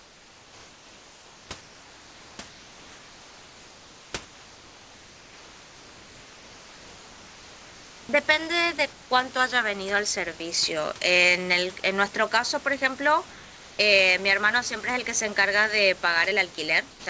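From 0.00 to 1.49 s, 1.61 to 2.39 s, 2.48 to 4.13 s, 4.25 to 8.09 s and 13.31 to 13.79 s, the room background becomes smooth, featureless hiss about 2 to 3 dB quieter. This is comfort noise in place of the background, likely from discontinuous transmission. On a spectrogram these stretches show uniform grey texture instead of detailed noise.

At 16.91 to 17.06 s, sound is dropped by the voice detector, likely after it mistook sound for background. Roughly 60 ms of audio vanishes into steady noise, which looks like an abrupt flat, low-level band on the waveform.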